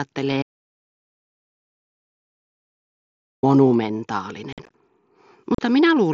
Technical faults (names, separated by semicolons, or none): audio dropout to silence; unconcealed Bluetooth headset packet loss